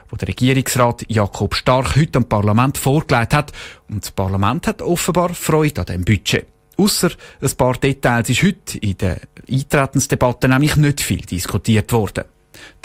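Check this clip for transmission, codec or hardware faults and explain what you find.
Nothing stands out here; the speech comes through steady and intact, with no transmission, codec or hardware trouble to point to.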